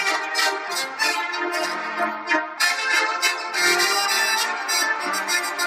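At 3.57 s and 4.82 s, compressed frames are skipped: whole 23.2 ms frames, about two and then one, never play, so the audio jumps forward roughly 50 ms and 20 ms. Unlike a dropout, nothing goes silent; the sound simply lurches ahead at the join.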